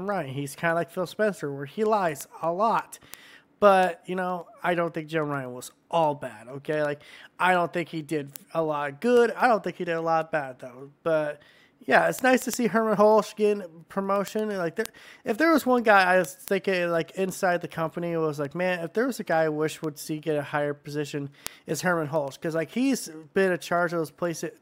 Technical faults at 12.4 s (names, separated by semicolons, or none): word clock ticks